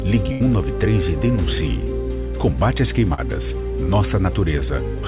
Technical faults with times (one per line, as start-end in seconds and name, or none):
0.32-0.42 burst of packet loss
3.14-3.20 short concealed packet loss